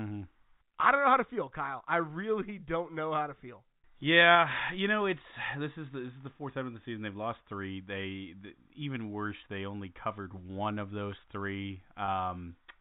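At 12.06 to 12.08 s, packet loss with pitch repetition. About 20 ms went missing, which fits a single lost packet. The receiver repeated the last pitch period, giving a brief, slightly buzzy held sound. The telephone-band G.711 coding can be heard throughout.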